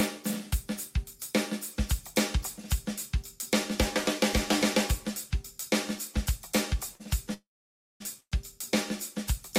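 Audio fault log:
6.95 to 7.02 s, short stall from a late packet: the last sound is held a little too long, with a faint buzzy smear, and then the audio carries on from exactly where it paused. A packet missed its playout time, so the jitter buffer ran dry and the receiver stretched what it already had for about 42 ms until the packet turned up. Nothing is lost, but everything after it plays 42 ms later.
7.34 to 8.02 s and 8.20 to 8.34 s, call audio freeze: each starts with a brief buzzy continuation of the last sound that fades away, then silence, about 560 ms the first time and about 60 ms the second, before the audio resumes from where it stopped. The gaps add 666 ms and 114 ms of delay, with nothing missing. The likely cause is packets held up in transit, leaving the jitter buffer empty while the receiver filled the wait.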